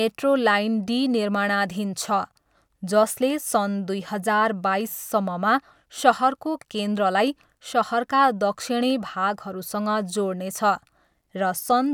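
No technical faults can be heard anywhere in the recording.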